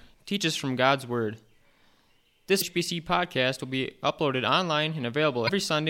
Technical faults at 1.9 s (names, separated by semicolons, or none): none